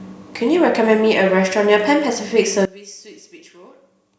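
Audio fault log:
2.65 s to 4.19 s, one channel inverted: from 2.65 s to the end the speech falls by about 22 dB to a faint copy. Likely one stereo channel has reversed polarity, so the shared centre content cancels when summed to mono.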